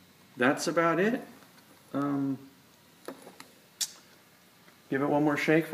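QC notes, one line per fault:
2.02 s, bit error spike. A single sharp tick peaks at about -29 dBFS. A flipped bit briefly forced a few consecutive sample values away from the signal, then they snapped back.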